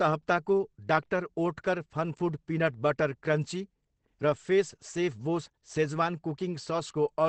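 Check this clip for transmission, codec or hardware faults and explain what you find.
One codec fault runs through the whole recording. From start to end the speech sounds muffled and hoarse, with nothing above about 8.6 kHz, so sibilants lose their crispness and the top end is gone. The heavy damage and narrow band most likely come from Opus compression in its SILK speech mode. At a starved rate, which fits roughly 12 kbps, the encoder drops to wideband and models the voice coarsely, which leaves this dull, rough texture.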